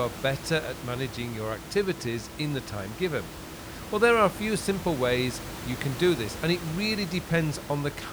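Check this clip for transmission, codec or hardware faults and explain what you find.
No transmission, codec or hardware faults are audible; the only background is room noise sitting about 12 dB below the speech, which belongs to the recording environment rather than the system.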